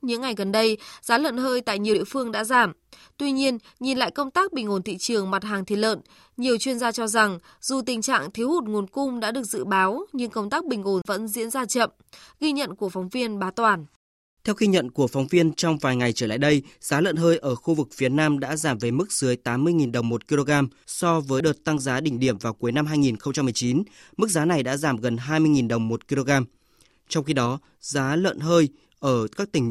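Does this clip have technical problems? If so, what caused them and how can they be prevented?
Yes. Damaged data in a compressed stream causes two brief glitches in this speech, at 1.91–1.94 s, between "giá lợn hơi tại" and "phương đã giảm", and at 21.37–21.41 s, between "đồng một kg so" and "đợt tăng giá đỉnh". Corrupted bytes in the encoded file make the decoder misread frames, lose sync and skip ahead to the next valid header, which produces the short glitch. Checksummed transfer, verified storage and error-resilient streaming settings would prevent it.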